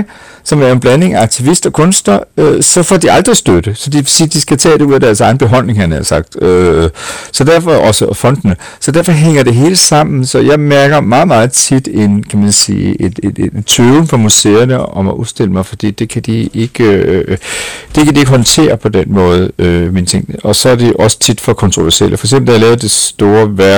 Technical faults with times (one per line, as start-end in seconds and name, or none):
0.00-23.78 hard clipping